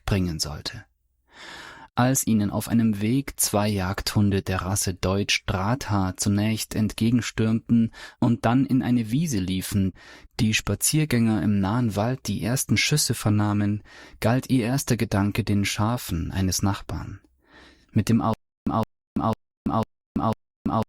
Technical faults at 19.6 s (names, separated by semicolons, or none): stutter with silent gaps